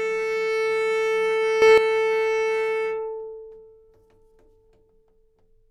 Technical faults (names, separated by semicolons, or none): sudden gain jump